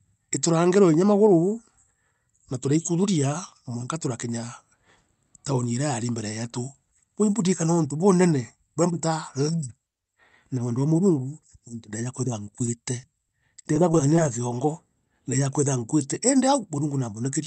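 Between 12.45 and 14.26 s, after "nuntu ndejaa kwithira", repeated packet loss leaves brief holes patched with the previous sound, so the speech turns choppy and robotic.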